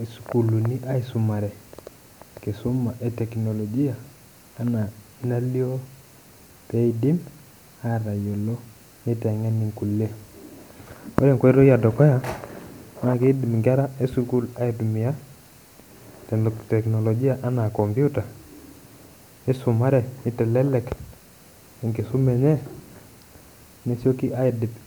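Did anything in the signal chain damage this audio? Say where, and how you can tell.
No, I can't hear damage from any stage of the signal chain in this speech recording. Nothing in it points to a point between capture and playback where the signal was altered.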